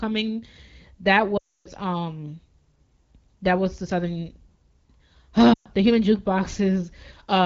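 Lost AMR speech frames at 1.37 to 1.69 s and 5.53 to 5.67 s: frames failed their checks, so the AMR-WB decoder reused its last good pitch and vocal tract settings with falling gain. The longer gap drops to near silence within two frames. Speech returns weak or rough each time.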